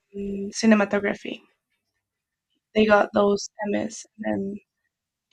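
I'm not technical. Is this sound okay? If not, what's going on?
Yes, this sound is okay, with nothing going wrong that you'd need to worry about.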